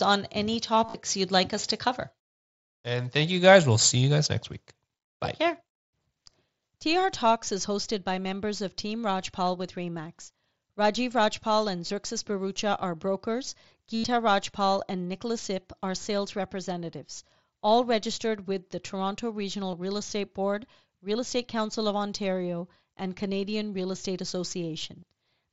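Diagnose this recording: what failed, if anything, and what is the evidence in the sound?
Concealed Bluetooth headset packet loss on the radio link: buzzy held patches at 0.85 s after "on any", 11.87, 13.95 after "are brokers", 16.03, 19.72 and 25.0 s. The phone fills each gap by repeating the best-matching recent waveform, so the 90 ms gap at 13.95 s buzzes most.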